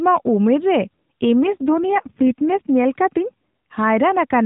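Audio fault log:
1.44–2.70 s AMR rate drop: speech within the unchanged 4 kHz band turns buzzier and more synthetic, consistent with a fall from about 12.2 to 4.75 kbps. The spectrogram shows smeared harmonics with no gap in the waveform.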